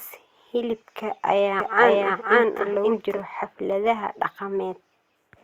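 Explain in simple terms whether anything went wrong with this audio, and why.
From 1.6 to 3.2 s, just after "hilibka ayaa", there's a doubled audio track: the speech plays twice, the copy about half a second behind and just as loud. It's likely captured a second time through a slower path. Unlike an echo, it never fades and starts and stops abruptly.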